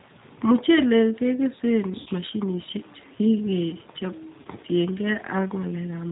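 From the start the speech sounds slightly rough and synthetic, with nothing above 4 kHz. This plainly audible damage comes from the G.729 codec, which fits an 8 kbit/s stream that rebuilds speech from a vocal tract filter, a pitch predictor and sparse pulses.

From 2.00 to 2.09 s the sound smears into a buzzy tone or coloured noise that fades, and again from 4.41 to 4.47 s. This is VoIP packet loss concealed by the speech codec. The decoder extended its last pitch and filter while lowering the gain, which fits gaps of about 60 ms and 40 ms, or three and two lost packets.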